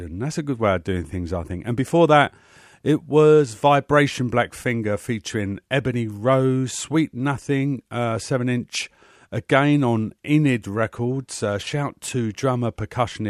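Nothing in this speech recording shows any technical fault; no glitch or break turns up anywhere along the way.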